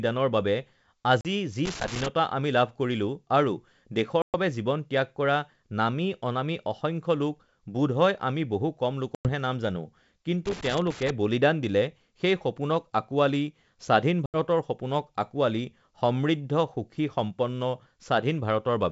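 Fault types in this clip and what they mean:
Packet loss on an ADPCM call: abrupt silent holes of 40 to 120 ms, each followed by briefly distorted speech, as the decoder's predictor loses track of the sender's.
Loose connector crackle: irregular bursts of scratchy crackle, near 1.65 to 2.08 s and 10.46 to 11.10 s, from a contact rapidly making and breaking.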